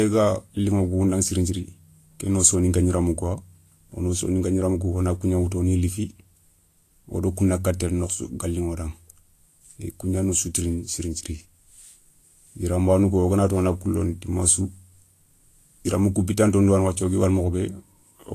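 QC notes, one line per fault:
throughout, Vorbis compression: nothing above 14.2 kHz, with plainly hissy, grainy treble where fine detail has become noise. That's likely a low-bitrate Vorbis encode, consistent with about 36 kbps.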